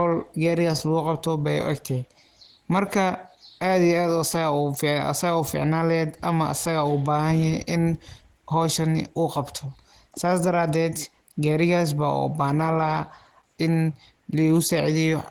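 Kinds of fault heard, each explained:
Opus compression: throughout, the speech sounds plainly muffled, hoarse and grainy, likely from Opus in hybrid speech mode at a low rate consistent with 16 kbps.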